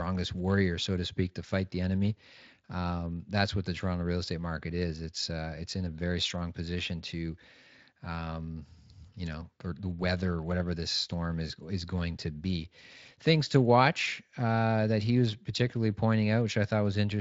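No faults to report: the speech sits on a Speex path at about 23.8 kbps with only light coding damage and nothing above 7.7 kHz.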